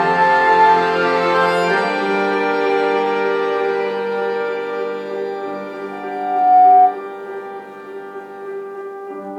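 From 5.91 to 6.99 s a loudspeaker feedback squeal appears: the microphone re-amplifies its own loudspeaker until 732 Hz runs away, swelling over roughly 0.7 s to about 10 dB above the sound. On a spectrogram it appears as one bright horizontal line, and the waveform envelope balloons.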